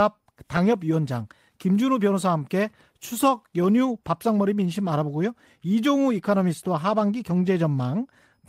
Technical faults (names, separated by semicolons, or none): none